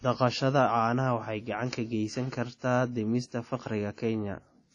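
Throughout the speech, nothing is heard above 10.1 kHz, and a ringing, washy smear with hiss that breathes with the signal is plainly audible. The likely cause is WMA compression at a low bitrate, consistent with 32 kbps: long transform blocks spread quantisation noise and zero weak spectral lines.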